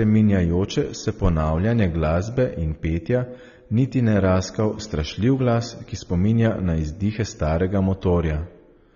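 AAC compression damage runs through the whole of this speech recording. Nothing reaches above 6.9 kHz, so the voice sounds dull, and the damage is plainly audible as a smeared, warbling texture on sustained sounds and a fizzy edge on sibilants. The likely cause is AAC-LC coding at a starved bitrate, which fits roughly 24 kbps: the encoder discards the upper band and quantises the remaining spectrum too coarsely to hold it steady.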